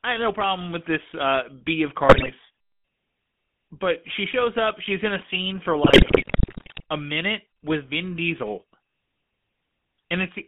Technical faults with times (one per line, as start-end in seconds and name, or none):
0.00-10.47 GSM full-rate codec
2.08-2.31 GSM bit errors
5.84-6.84 GSM bit errors